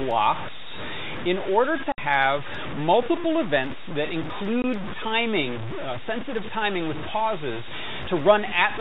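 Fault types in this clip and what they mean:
Low bit depth without dither, throughout: a coarse, grainy distortion sits on the speech for the whole clip and shifts with it, roughest where the level falls, with the noise only roughly ten decibels below the signal. It sounds like the signal was likely truncated to very few amplitude steps, consistent with about 5 bits, without dither. The error therefore follows the waveform rather than forming a steady hiss.
Packet loss filled with silence, 1.92 to 1.98 s and 4.62 to 4.64 s: the speech is cut by two abrupt holes of dead silence, 60 ms and then 20 ms long, with hard edges where the sound stops and restarts. Chunks of audio never arrived, and the receiver played silence instead of smoothing over them. The gap lengths fit a 20 ms packet size, with three packets lost in a row at the first gap and one at the second.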